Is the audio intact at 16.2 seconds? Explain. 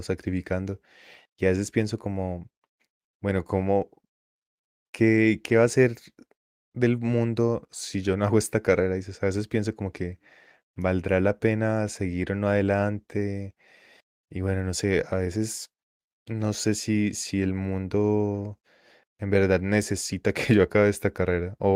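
Yes, at 16.2 seconds the speech plays through intact, with no audible fault at that moment.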